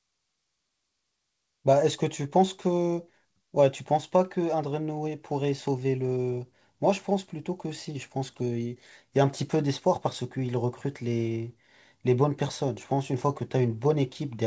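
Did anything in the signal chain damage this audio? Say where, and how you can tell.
Yes. Clock drift between sender and receiver runs through the whole clip, at the network and jitter-buffer stage. The sender's clock runs about 2% slow, so the receiver's buffer keeps draining and needs refilling. The G.722 path itself cuts cleanly above 8 kHz.

Repeated timing corrections run from 0.26 s to 14.01 s. The receiver repeats short slices to cover the shortfall, playing at 98% speed and adding roughly 0.3 s overall. You hear it as scattered, unevenly spaced hiccups and a slightly dragging, unsteady tempo.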